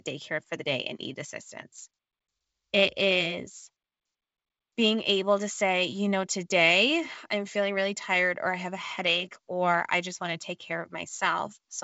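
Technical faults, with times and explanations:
Nothing here counts as a fault: the speech comes across as ordinary G.722 wideband telephone audio at 64 kbit/s, with the band topping out around 7.7 kHz as that coding does.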